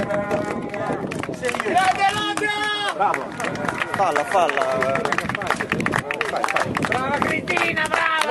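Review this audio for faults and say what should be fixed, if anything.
No faults; nothing needs fixing.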